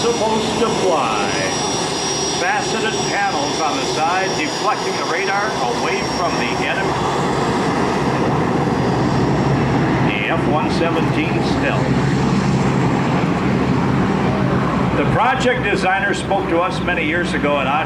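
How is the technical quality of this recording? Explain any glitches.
Two technical faults are audible: a constant timecode bleed, and a brief jitter buffer speed-up near the end.

Timecode bleed runs throughout. A chirping warble sits about 35 dB below the audio and flips between tones near 1 and 2 kHz. Linear timecode at 23.976 frames per second has leaked in from an adjacent track or cable. Its rapid pitch-switching separates it from a steady hum or whine.

The jitter buffer speed-up runs from 15.48 to 16.61 s. The sound plays about 6% fast and hurried, and around 70 ms of material is trimmed away in small pitch-period slices to drain an overfilled buffer. Pitch stays unchanged, which rules out a simple playback-speed error.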